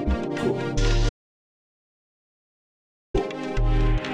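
An audio dropout to silence runs from 1.09 s to 3.14 s, about 2.05 s in which the sound cuts off mid-flow and falls to silence with no room tone. The likely cause is lost input, such as a disconnected device or failed link, while recording continued.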